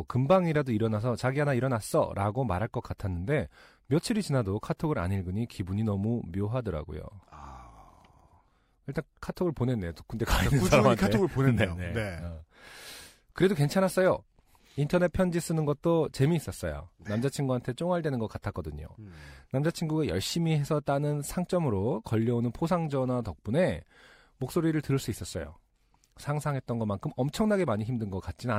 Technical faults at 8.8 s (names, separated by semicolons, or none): none